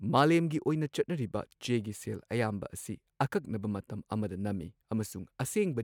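No technical faults can be heard in this speech.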